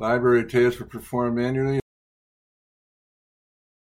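At 1.80 s, just after "tasks were performed manually", the speech cuts to dead silence that runs to the end, an audio dropout to silence. The input was likely lost, so only silence followed: a flat waveform line, and on the spectrogram a blank band with no room tone.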